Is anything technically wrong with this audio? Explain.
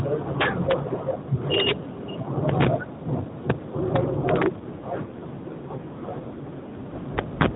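Yes. Two kinds of fault affect this speech, which travels over an AMR-NB narrowband mobile link that passes nothing above 4 kHz.

Integer overflow occurs at 0.41 to 0.72 s, 1.54 to 1.72 s, 2.49 to 2.67 s, 3.96 to 4.46 s and 7.18 to 7.46 s, overdriven by about 10, 5, 4, 3 and 8 dB. Peaks exceed the largest integer and wrap to the opposite sign instead of being limited, producing violent cracks far harsher than clipping.

An AMR rate drop runs from 4.60 to 7.07 s, where the codec falls from 12.2 to 5.9 kbps. With fewer bits describing each frame, the voice turns rougher, buzzier and more synthetic while the bandwidth stays the same and no gap appears.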